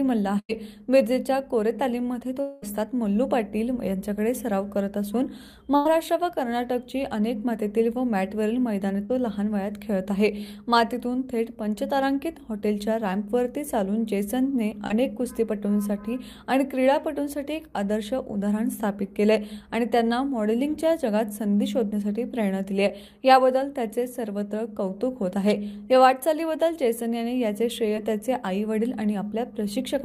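The audio has packet-loss faults of three kinds. A burst of packet loss hits at 0.39 to 0.51 s and 5.76 to 5.87 s. About 100 ms goes missing each time. The last sound is held and faded, then audio resumes further on. At 2.41 to 2.64 s, about 220 ms is lost. A fading buzz or hiss fills almost all of it, with no silence. The likely cause is a long network dropout. Short concealed packet loss appears at 9.05 to 9.11 s, 14.87 to 14.92 s and 27.96 to 27.99 s. Each is a brief smear or wobble where 20 to 40 ms went missing.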